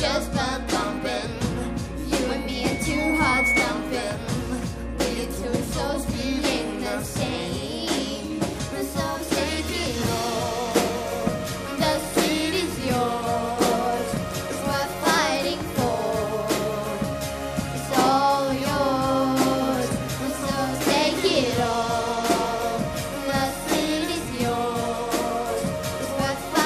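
At 2.22 s a loudspeaker feedback squeal starts, a single tone near 2.2 kHz that swells over about a second and a half until it's riding roughly 5 dB above the rest of the audio, then it's gone by 3.73 s. What's happening is the mic is hearing the speaker it feeds, and at that one frequency the loop gain tips past unity, so the tone keeps feeding itself and climbing until the loop gets broken.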